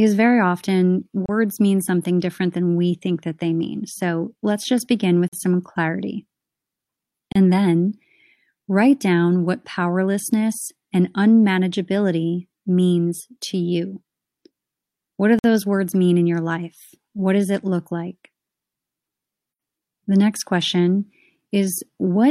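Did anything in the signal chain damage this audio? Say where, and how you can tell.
Yes, there's a gap between stream segments at playback. Hard-edged silent holes hit the speech at 1.26 s, 5.28 s, 7.32 s and 15.39 s, lasting about 31 to 51 ms. The timestamps of adjacent 2-second segments don't quite meet, so the player pads with silence. Nothing's lost, just delayed.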